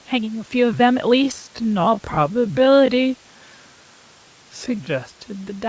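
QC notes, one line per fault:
1.14–5.69 s, time-stretched section: from 1.14 s to the end, the speech abruptly slows to 0.59 times its pace while its pitch stays the same, so syllables drag. The likely cause is software lengthening the audio by repeating short overlapping pieces. On a spectrogram, harmonics hold their frequencies but stretch out in time with blurred onsets. The waveform shows drawn-out syllables and softened transients.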